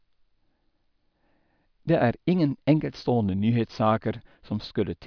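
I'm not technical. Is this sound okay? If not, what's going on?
Yes, this recording sounds fine, with no technical faults to be heard. Nothing in it needs fixing.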